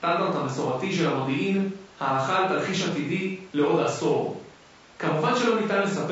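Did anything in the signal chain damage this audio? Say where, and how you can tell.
Yes, at the codec stage: grainy, rough speech throughout, noise filling between harmonics, likely low-delay AAC compression near 32 kbps. Its low-delay window codes only about 500 frequency lines a frame, unlike steady hiss.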